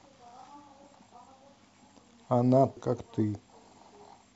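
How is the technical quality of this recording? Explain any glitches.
The recording has one glitch, at 2.77 s in the speech: damaged data in the compressed stream. The decoder misreads the corrupted frame, loses sync and recovers at the next header, leaving a brief chirp, squawk, click or short hole.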